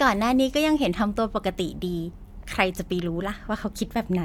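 No technical faults are audible.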